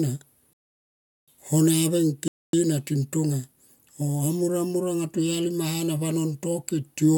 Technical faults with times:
0.53-1.28 rebuffering stall
2.28-2.53 rebuffering stall

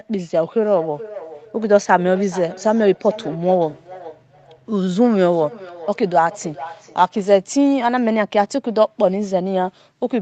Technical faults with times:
0.67-7.06 feedback echo between two devices

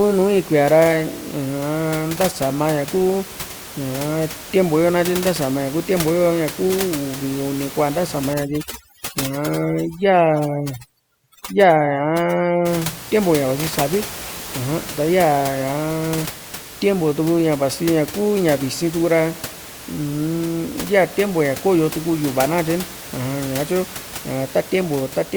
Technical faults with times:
8.34-12.65 overdone noise removal

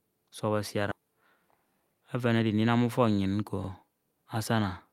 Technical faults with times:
0.91-0.93 skip ahead
1.01-2.69 jitter buffer speed-up
1.59-1.64 overlapping chunks
3.64-3.69 overlapping chunks

